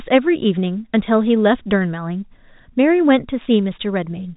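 No technical faults are audible.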